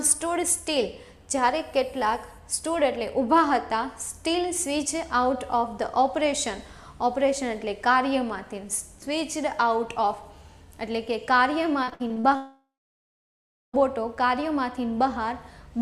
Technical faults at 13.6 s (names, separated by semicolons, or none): long network dropout